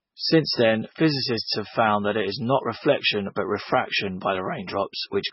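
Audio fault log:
throughout: MP3 compression, likely, with nothing above 5.6 kHz and a heavy watery swirl as weak lines flicker between frames, unlike a plain low-pass. The damage fits about 16 kbps.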